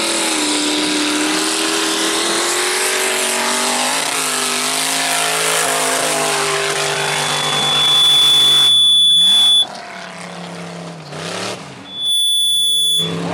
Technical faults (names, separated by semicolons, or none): loudspeaker feedback squeal